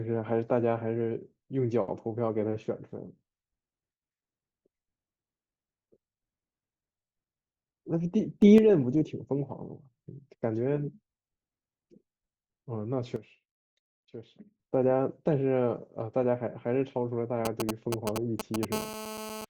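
A speech recording with three kinds of fault. The first is a sudden gain jump, most likely from a gain setting applied between one sample and the next with no ramp. At 8.42 s the level steps up by about 6 dB and drops back at 8.58 s. At 13.16 s it falls by about 12 dB and recovers at 14.59 s. Both times the speech and the background noise move together, so the room seems to lurch closer and back the first time, and to recede and return the second. The second is GSM signalling bursts from 17.45 s to 18.65 s. A nearby 2G phone is exchanging brief groups of radio bursts with the network rather than carrying a call, and the audio circuitry rectifies those pulses into the signal. The result is a galloping dit-dit-dit of short buzzes near 217 Hz, roughly as loud as the speech itself. The third is GSM phone buzz from 18.72 s to 19.45 s. A nearby phone is now in a call and transmits at 217 bursts per second, so the rectified pulses become a steady, hard, raspy 217 Hz buzz full of harmonics. 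That buzz sits about 8 dB below the speech and has no relation to what is being said.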